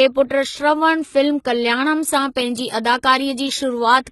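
HE-AAC compression runs throughout the speech. The likely cause is spectral band replication: the treble above the coded lower band is synthesized from copied lower bands, so sibilants sound gritty and metallic. The heavy damage points to a bitrate near 16 kbps, and nothing remains above 11.8 kHz.

Pre-emphasis left on starts at 2.08 s and lasts to the end. The treble boost was never undone by its matching cut, leaving 10 kHz about 8 dB above 1 kHz, which fits the CD 50/15 µs curve. The sound turns thin, bright and sibilant.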